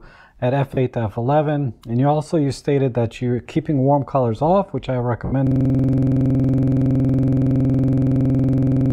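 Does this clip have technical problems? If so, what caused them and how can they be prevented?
Yes. Lost LE Audio frames at 0.74–0.77 s (30 ms) and 5.25–5.32 s (70 ms) leave brief noisy smears where the LC3 decoder repeated the last spectrum with random signs. On a spectrogram, harmonic lines blur into broadband fuzz. Keeping the Bluetooth link strong and free of interference prevents this.

A system hang loop runs from 5.47 s to the end. A 46.44 ms piece repeats at 21.5 Hz, which fits a 2048-sample buffer, and produces a stuttering buzz. The waveform shows identical tiled blocks, and the spectrogram shows vertical stripes. Fixing the driver or system freeze prevents it.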